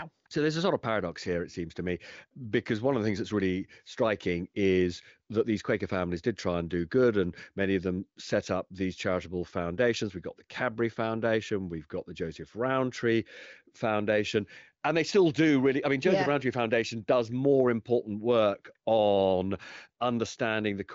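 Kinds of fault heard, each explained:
No kinds of fault are heard in this speech.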